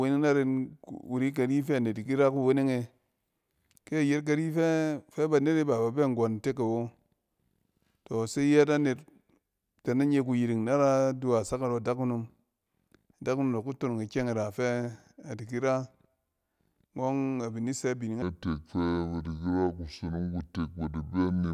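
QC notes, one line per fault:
18.22–21.54 s, wrong sample rate: Right after "abin di sɛ bining", the speech drops in pitch by about 7 semitones and slows to two-thirds speed. Pitch and tempo fall together by the same ratio, with no conversion between rates. That points to audio captured at 48 kHz being played back at 32 kHz. Each second of recording is stretched over one and a half seconds, so the voice sounds deep, heavy and dragged until the clip ends.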